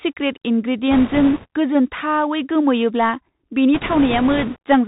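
The whole clip of speech has passed through a Bluetooth CVSD headset codec, the narrowband link that sends a single up-or-down bit per sample and adapts its step size as it goes, which fits a 64 kbps stream. The damage is plainly audible. Everything above 4 kHz is gone, leaving a boxed-in, telephone-like tone. Sibilants come out scratchy, loud bright moments smear as the step size fails to keep pace, and a fine granular hiss runs beneath the speech.

From 0.91 to 1.47 s, bit errors on the Bluetooth voice link corrupt the stream at a rate of roughly 7 percent. Because each CVSD bit nudges the waveform only a small amount and a wrong bit's effect fades quickly, there are no sharp clicks. Instead a rushing, crackly noise rises over the speech. It returns from 3.74 to 4.58 s at a lower error rate of around 5 percent, so the crackle in that second stretch is somewhat lighter.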